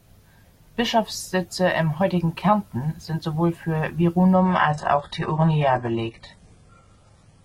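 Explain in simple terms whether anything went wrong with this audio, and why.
From 4.34 s, right after "sind sowohl für", the adaptive stream switched to a lower bitrate because the connection slowed, and stayed there to the end. The speech suddenly turns duller, with nothing above 11.1 kHz, but with no gap.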